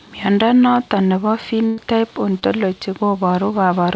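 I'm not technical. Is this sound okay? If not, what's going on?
No. A burst of packet loss hits from 1.66 to 1.79 s. A run of audio, about 120 ms, never arrived in time, so the receiver stretched the last sound to cover the hole while fading it. The speech then jumps ahead, with that stretch missing.

A short concealed packet loss follows at 2.39 to 2.44 s. About 20 ms went missing, and the receiver patched it by continuing the sound just before. You hear a brief smear or wobble, and a small piece of speech may slip away.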